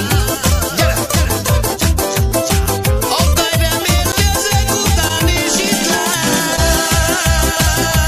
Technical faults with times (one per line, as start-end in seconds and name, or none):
3.29-3.34 short concealed packet loss
4.12 CD skip
5.08-5.11 short concealed packet loss
6.56-6.59 short concealed packet loss